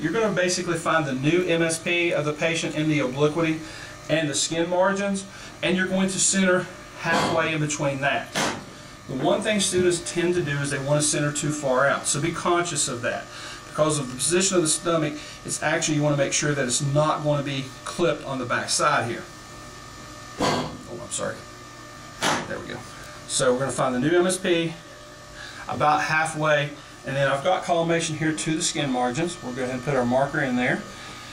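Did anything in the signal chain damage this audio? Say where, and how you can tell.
Yes. One channel reaches the mono sum roughly 20 ms after the other, which points to a driver or buffer stage holding one side back before the channels are mixed down. This is channel delay causing comb filtering. It is present throughout. Content common to both channels cancels at evenly spaced frequencies, starting around 30 Hz and repeating roughly every 50 Hz upward. At this delay length the whole sounds rough and slightly doubled rather than full.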